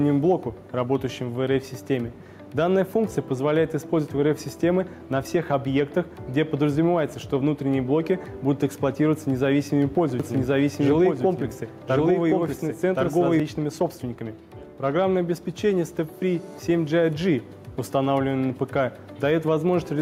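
Gain pumping runs through the whole clip. The level ducks on each loud sound, a swing of about 5 dB. The likely cause is input gain set far too high, with a fast limiter clamping every peak, leaving the dynamics squashed.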